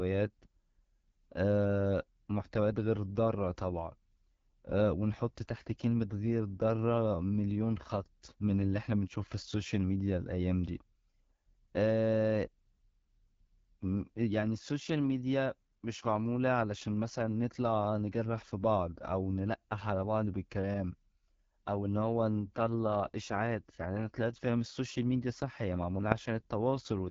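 From start to finish the speech has passed through the AMR wideband (HD Voice) codec at one of its lowest rates. The roughness fits about 8.85 kbit/s. At that rate the pulse-driven vocal tract model has too few bits to shape each voice, so the speech turns rough and raspy, with plainly audible codec damage. The top band is synthetic noise rather than real detail, and nothing is heard above 7.6 kHz.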